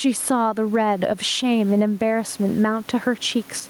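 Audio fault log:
Throughout, gain pumping: the gain is pulled down under every loud syllable by around 10 dB, with the room background sitting about 33 dB below the speech. This squashes loud and soft parts together, likely from input gain set far too high with a fast limiter.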